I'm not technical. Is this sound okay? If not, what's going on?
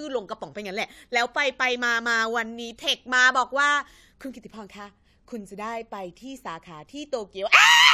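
Yes, no technical faults can be heard anywhere in this speech recording.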